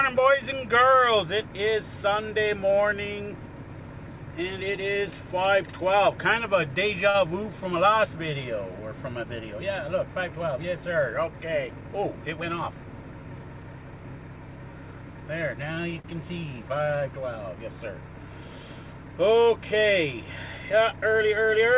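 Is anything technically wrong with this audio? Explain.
Yes. There are two short stalls from a late packet, at 7.10 to 7.16 s and at 16.00 to 16.06 s. Each time, a packet arrived late and the jitter buffer ran dry. The receiver held the last sound for about 40 ms, and 38 ms the second time, then resumed where it left off. Nothing is lost. The sound briefly freezes, with a faint buzz or dip, and everything after runs slightly later. The call path itself, whose 4 kHz band limit fits G.711 mu-law, is not a fault.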